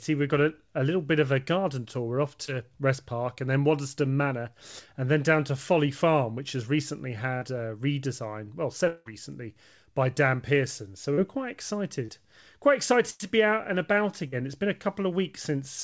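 The first short concealed packet loss falls at 2.46 to 2.50 s. About 20 ms of audio failed to reach the decoder in time, and the receiver bridged it by extending the preceding sound before blending back into the real signal. It registers as a brief smear or wobble rather than a gap. The wideband call path runs throughout, with nothing above 8 kHz, which fits a G.722 link.

From 8.87 to 9.08 s, right after "a redesign well", comes a stretch best described as a long network dropout, likely caused by a stall in packet arrival. About 180 ms never played, and the concealment ran for the whole gap rather than falling to silence. The last sound is carried on as a fading buzz or hiss, and the audio picks up further on with that portion missing.

Further short concealed packet losses occur at 11.14 to 11.19 s, just before "were quite", then at 12.05 to 12.10 s and at 14.28 to 14.34 s. Each removes about 20 to 40 ms, and each is covered by a continuation of the preceding sound, heard as a short wobble or smear.

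At 13.10 to 13.22 s, immediately before "be out and about", a burst of packet loss removes about 100 ms. The receiver holds the last sound and attenuates it across the gap, so a voiced sound turns into a sustained buzz and other sounds into a decaying hiss. Speech then resumes past the lost section.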